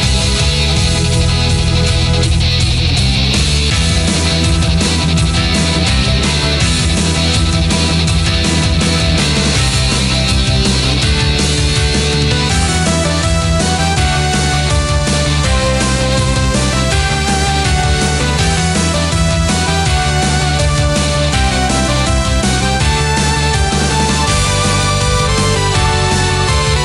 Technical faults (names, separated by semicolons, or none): compressed frames skipped